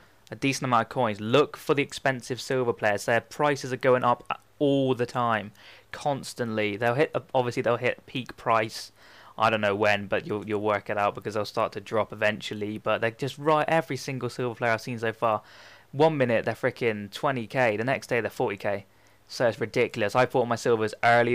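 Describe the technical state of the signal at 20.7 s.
Nothing goes wrong at 20.7 s; the audio is intact there, with no audible fault.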